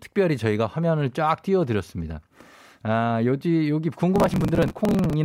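From 4.16 to 5.14 s the speech breaks into processor overload crackle: dozens of buffers of a few milliseconds are skipped in quick succession, each leaving a hard-edged gap. Unlike a single dropout, it is a dense gritty tearing that rides on the sound throughout the stretch.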